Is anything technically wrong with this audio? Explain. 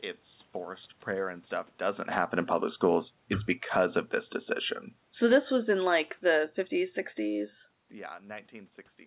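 Yes. One fault is audible. From 5.09 to 7.6 s, just after "because of this decision", the automatic gain is falling. The gain control judged the input too loud, or its background noise too strong, and eased its gain down by about 4 dB. The speech sinks gradually, and the room noise sinks with it.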